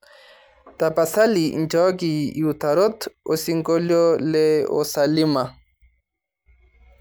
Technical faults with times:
none

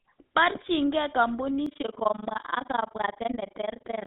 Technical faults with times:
0.00-4.06 GSM full-rate codec
1.66-4.06 overlap-add ripple

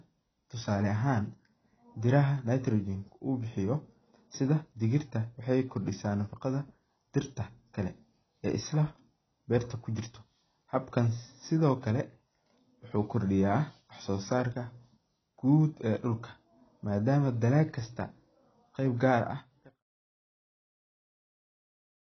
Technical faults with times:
0.00-22.03 AAC compression

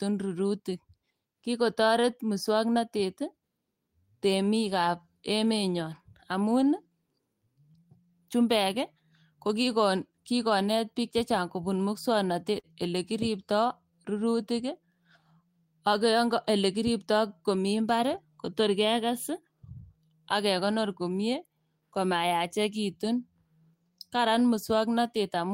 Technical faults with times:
12.59-12.67 short stall from a late packet

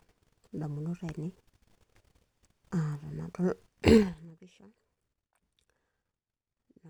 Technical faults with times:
3.95-4.32 zipper noise

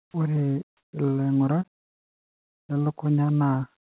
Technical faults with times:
0.02-0.14 comfort noise in place of the background
0.12-0.14 onset clipped by the voice detector
0.77-0.92 comfort noise in place of the background

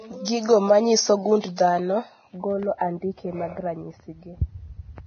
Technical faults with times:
0.00-5.06 Vorbis compression
1.41-1.58 pre-echo
2.78-2.81 pre-echo

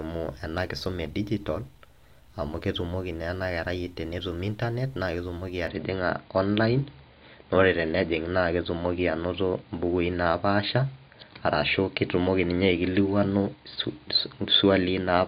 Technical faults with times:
5.67-15.27 input switched to a poorer device

